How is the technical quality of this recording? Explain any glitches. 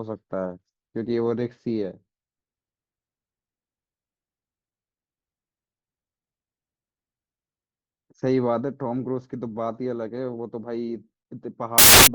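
There's one glitch, right at the end. From 11.78 to 12.07 s the samples are built from the wrong bytes: byte order or alignment slips, so the jittery low bits dominate and the sound becomes a burst of loud, harsh broadband noise.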